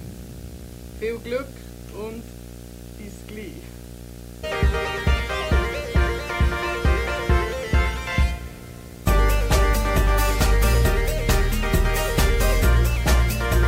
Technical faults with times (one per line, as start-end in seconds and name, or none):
0.00-13.68 video or display buzz